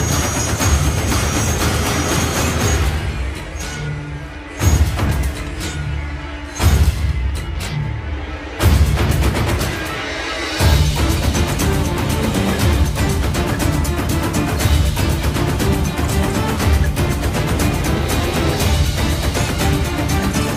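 No dropouts, clicks, glitches or level jumps turn up anywhere in the audio; nothing to flag.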